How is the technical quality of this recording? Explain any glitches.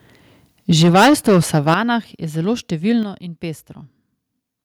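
The recording has two audible problems: heavy clipping early on and a series of abrupt level drops.

Microphone overload runs from 0.7 to 1.74 s. Peaks were driven about 13 dB past the converter's limit, flattening a sizeable share of the waveform. The likely cause is excessive input gain driving the converter into its ceiling, producing a harsh, crackling edge on the loudest syllables.

Microphone volume stepped down three times: about 2 dB at 0.73 s, about 9 dB at 1.74 s and about 7 dB at 3.03 s. Each is likely the call software cutting input gain after finding the microphone too loud or clipping. Voice and background fall together in one sudden step.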